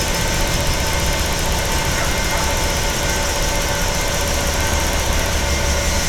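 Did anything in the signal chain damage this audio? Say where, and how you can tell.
No, nothing in the signal chain has damaged this recording of sounds. I can't hear anything at any point that points to trouble at any stage between capture and playback.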